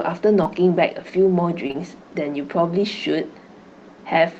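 At 0.43 to 0.47 s there is a short concealed packet loss. About 20 ms of audio arrived too late for the decoder. The receiver extended the preceding sound and blended back into the real signal. It is heard as a brief smear in the speech. Two more follow back to back at 1.67 to 1.76 s. Each hole is about 20 ms. Together they make a longer wobble, and a short consonant may drop out.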